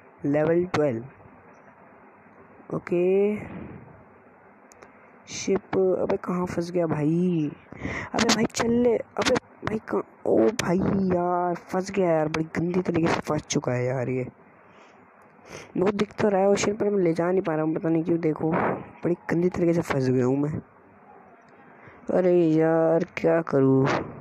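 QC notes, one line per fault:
23.20–23.22 s, repeated frames: A single 23.2 ms block of audio plays twice in a row. The sound jumps back and repeats that slice, heard as a brief stutter near the very end. The length matches one compressed frame. The duplicate adds 23.2 ms to the running time.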